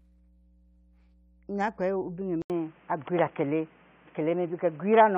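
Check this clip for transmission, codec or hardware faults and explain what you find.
Two faults are present: continuous mains hum and an abrupt change in input quality partway through.

Mains hum runs through the whole clip as a steady 60 Hz tone about 30 dB below the speech. A ground loop or nearby transformer is coupling the power line into the signal path, leaving a constant low drone under everything.

At 2.42 s the audio drops out for about 80 ms. When it returns, nothing above 3.4 kHz remains, the level shifts by around 5 dB, and a new noise floor sits roughly 30 dB down. The likely cause is the input switching to a poorer device, such as a headset call profile.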